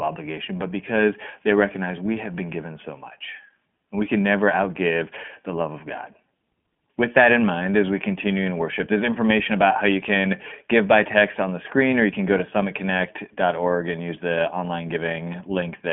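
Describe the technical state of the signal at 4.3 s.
At 4.3 s the speech sounds thin, rough and synthetic, with nothing above 3.8 kHz: iLBC codec damage throughout the clip, each short frame's excitation coded independently.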